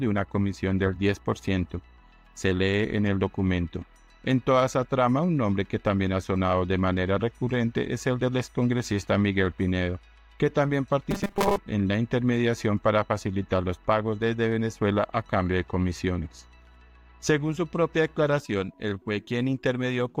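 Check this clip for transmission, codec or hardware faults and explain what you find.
One fault is present. From 11.11 to 11.56 s there is robotic sound from repeated short buffers. The likely cause is late-arriving audio being replaced by a looped 5 ms chunk. Most of the audio in that stretch is repeated. This imposes a rigid, metallic 200 Hz buzz.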